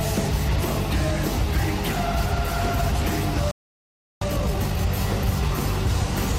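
At 3.51 s the sound stops dead in mid-flow. Silence lasts about 0.70 s, until 4.22 s. This is a playback stall. The player likely ran short of data or had its thread blocked, so output simply halted until it recovered.

From 4.22 s to 4.90 s comes time-compressed catch-up. The player trims its backlog by cutting small pieces and cross-fading the rest. The audio runs at twice normal speed. Pitch stays unchanged.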